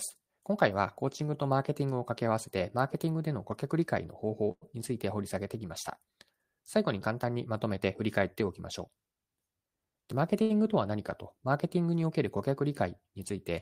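At 4.51 s the audio stops advancing for about 0.1 s, until 4.63 s. The last sound is carried forward as a short buzz or hiss that fades, and roughly 50 ms of that stretch is silent. The audio then resumes exactly where it left off, with nothing lost, only delayed by about 100 ms. This pattern is a call audio freeze, likely caused by packets held up in transit long enough to drain the jitter buffer.

From 9.57 s to 10.41 s there is a jitter buffer speed-up. The receiver had more audio queued than its target and trimmed it by cutting out short pitch-period-sized pieces over and over. Playback runs at about 110% of normal rate without any change in pitch. Around a tenth of a second of material is shed across that span, and the delivery sounds rushed.

Immediately afterwards, from 10.42 s to 10.60 s, comes a short stall from a late packet. A packet missed its playout time, so the receiver stretched the sound already in hand for about 77 ms while it waited, then carried on from the same point. 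Nothing is skipped, but one sound is held too long and takes on a faint buzz or dip before normal flow returns.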